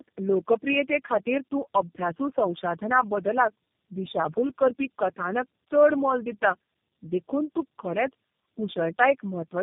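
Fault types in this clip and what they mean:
Tandem speech coding: the speech passed through three low-rate codecs in turn, each recoding the previous one's damage. It sounds rough, muffled and warbly, with nothing above 3.7 kHz.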